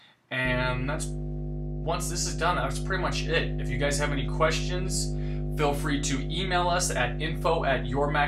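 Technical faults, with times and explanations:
0.45–8.28 s: mains hum. A steady 50 Hz tone with low harmonics enters at 0.45 s and holds to the end at about the same level as the wanted sound, consistent with power-line current coupling into the signal through a ground loop or nearby transformer.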